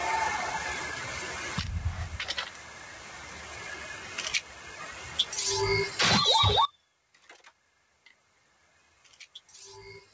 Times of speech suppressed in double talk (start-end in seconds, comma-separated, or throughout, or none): none